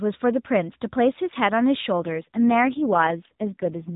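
An AMR rate drop begins at 1.99 s and lasts to the end of this speech clip. The band stays the same and nothing drops out, but the voice turns rougher and more synthetic. That fits a step down from about 12.2 to 4.75 kbps on a weak radio link, with fewer bits left for the voice.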